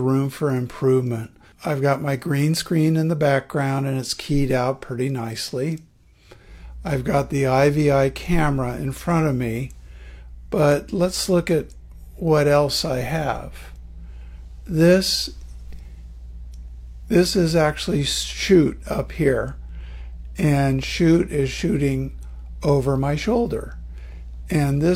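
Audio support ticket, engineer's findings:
No faults found on listening.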